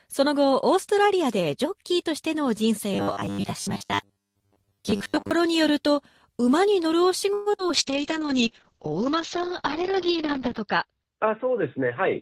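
From 2.94 to 5.31 s the sound turns into a rigid, metallic buzz at about 100 Hz, with most of the real audio replaced by repeats. This is likely robotic sound from repeated short buffers: the last 10 ms or so was looped while fresh audio arrived too slowly, which fits a 10 ms buffer.

Between 7.33 and 7.71 s the audio goes choppy and robotic, with small pieces gone. This is repeated packet loss: four holes were patched by stretching the preceding sound, covering 159 ms, about 42% of the span. Another 80 ms was simply lost, and the longest gap ran 127 ms.

From 7.74 s to the end the sound becomes rough, watery and muffled. This is a call bitrate drop, with the encoder pushed from 32 kbps down to 7 kbps. The bandwidth narrowed from 20 kHz to 6 kHz, and the lowest rate held for 2.82 s.

Overlapping this, from 8.00 to 8.91 s the audio drags slightly, running at 95% speed with unchanged pitch. 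This is a jitter buffer slow-down: the receiver repeated short pitch periods and pause fragments to rebuild its reserve, adding 50 ms.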